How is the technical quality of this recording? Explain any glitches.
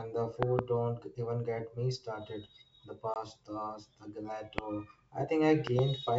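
The recording has two kinds of glitch: five loud pops and one dropout. The wideband G.722 telephone coding is clear, with at most a faint trace of its own artefacts.

Loud pops occur at 0.43 to 0.61 s as a double pop, at 4.58 to 4.61 s as a single one, and at 5.67 to 5.81 s as another pair. Each peaks at about 20 dB above the speech. A sudden voltage pulse, likely from a switch, plug or static, lands on the signal. The speech carries on underneath each pop.

Packet loss on the ADPCM call appears at 3.14 to 3.17 s. About one packet, 20 ms of audio, goes missing and becomes a hard-edged silent gap. The decoder's predictor then restarts out of step with the sender. Speech comes back slightly distorted before settling.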